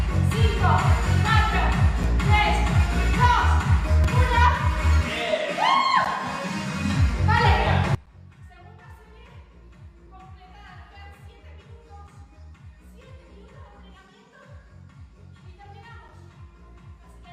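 At 2.03, 4.04 and 6.05 s the sound breaks off in short holes with hard edges. This is a gap between stream segments. The timestamps of consecutive segments leave a small space, and the player fills it with silence. The holes repeat every 2.0 s, which points to 2-second segments. They last from about 5 ms to 13 ms. Nothing is lost from the sound itself. It is only pushed later.

From 7.95 s to the end, the level drops by about 26 dB and the sound turns faint. The likely cause is one channel inverted. With one stereo channel's polarity reversed, the content common to both channels cancels when they are summed to mono. Material common to both channels almost disappears. What remains is the small difference between the channels.

The segment gaps continue through this stretch at 8.06, 10.07, 12.07, 14.08 and 16.08 s. Each is a brief silent hole of about 4 to 10 ms, still on the same 2-second rhythm.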